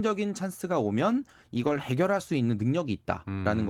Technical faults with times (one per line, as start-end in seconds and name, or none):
1.57-1.79 lost packet rebuilt from error correction